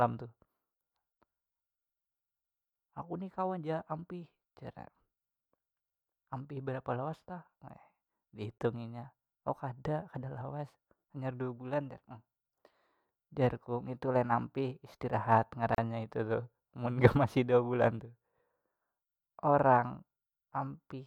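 At 8.58 to 8.60 s the speech drops out for about 25 ms, and again at 15.75 to 15.78 s for about 35 ms. Both are gaps at a join of encoded pieces: each piece was encoded on its own, and the encoder's start-up delay and last-frame padding were left in at the splice. You hear a quick hard hole with softened edges, then the speech picks up right where it left off.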